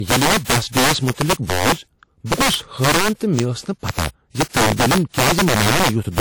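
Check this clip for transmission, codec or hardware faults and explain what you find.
Two faults run through the whole speech clip: integer overflow and low-bitrate audio saved at a high bitrate.

Integer overflow: gain pushed the signal about 12 dB past the integer limit, so peaks wrap to the opposite sign. Roughly one sample in twenty flips, giving harsh cracks on loud syllables.

Low-bitrate audio saved at a high bitrate: the audio was likely coded at a low bitrate and then re-saved as high-bitrate MP3. The first encoding's artefacts remain, with content extending to about 20.1 kHz.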